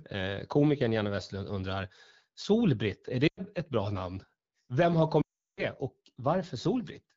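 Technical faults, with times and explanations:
3.27–3.41 s and 5.22–5.64 s, lost AMR speech frames. The decoder lost 0.1 s, then 0.36 s. It repeated the last pitch and tone at falling level. The first gap drops to near silence just before "ett bra namn". The second drops to near silence within two frames.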